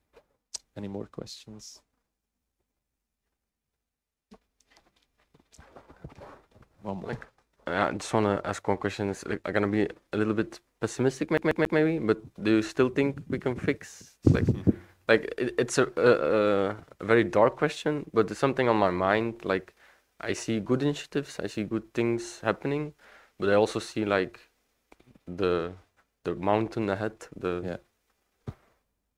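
At 11.38 s the sound catches like a CD stuck on one turn. A 138 ms slice repeats three times, with a brief mute at each jump, until 11.79 s. A scratch sends the laser back one track each rotation. The result is a fast, even stutter.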